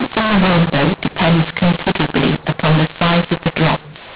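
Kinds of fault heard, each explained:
mu-law and A-law mixed up: Speech coded with mu-law is decoded as A-law. Levels come out scrambled, so it sounds harsh and distorted, and pauses fill with noise.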